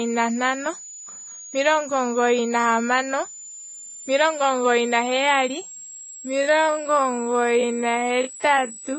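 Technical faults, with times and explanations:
throughout: switching supply whistle, a thin high tone wandering between 6.7 and 7.9 kHz, roughly 20 dB under the speech; its drifting pitch distinguishes it from a steady mains-harmonic whine.
throughout: transcoding between lossy codecs likely, with layered swirly, smeared artefacts, which fits an MP3 stage followed by Vorbis rather than a single low-bitrate encode.
5.99–8.99 s: time-stretched section after "omugoyi naheyali", likely slowed to 0.56 times speed with pitch unchanged, so it drags; the steady pitch rules out simple slow playback.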